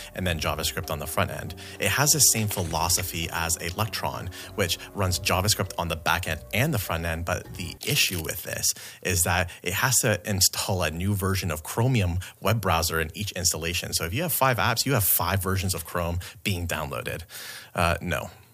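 Listening closely, nothing in the audio stood out as a technical problem.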